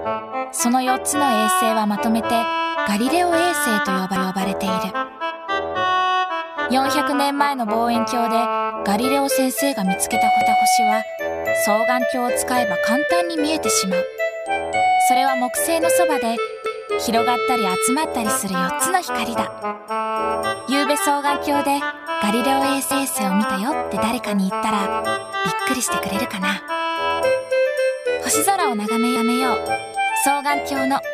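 Overlapping chunks: at 4.16, 10.41, 16.66, 22.91 and 29.16 s, a 250 ms stretch of audio plays twice where 6 s chunks join. A waveform shows identical repeated segments, and a spectrogram shows vertical click lines at the seams.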